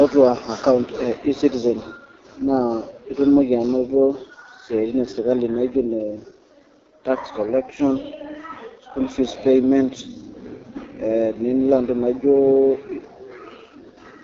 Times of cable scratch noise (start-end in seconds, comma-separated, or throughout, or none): none